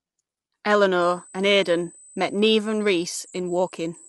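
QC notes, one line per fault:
Throughout: low-delay AAC compression, likely. The speech sounds plainly rough and grainy, with noise between harmonics and nothing above 11.6 kHz, which fits AAC-ELD at around 32 kbps.
1.02 s to the end: USB whine, a steady 8 kHz tone loudest at its 16 kHz harmonic and sitting about 20 dB under the speech, from the bus's 125 microsecond microframes leaking through power or ground.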